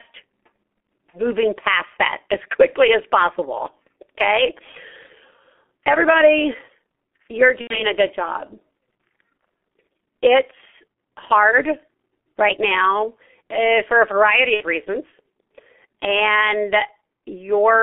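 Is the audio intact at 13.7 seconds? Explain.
No. At 13.7 seconds the speech carries the G.723.1 codec damage present across the whole clip. The low-rate coding, consistent with about 6.3 kbit/s and coarse 30 ms frames, leaves the speech muffled and hoarse with smeared consonants. On a spectrogram, energy is confined to roughly 250 Hz to 3.4 kHz with an empty band above, and formants appear blocky and stepped.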